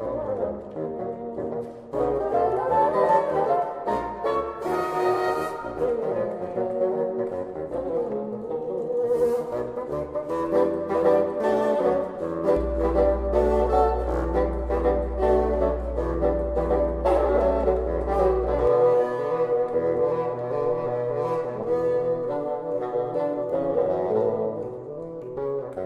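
A ground loop or nearby transformer couples the 60 Hz power line into the signal from 12.57 to 18.67 s, producing mains hum: a steady low tone with some low harmonics, sitting only slightly below the level of the sound itself.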